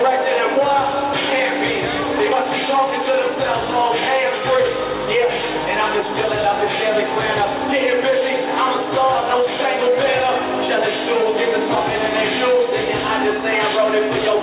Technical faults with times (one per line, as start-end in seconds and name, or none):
none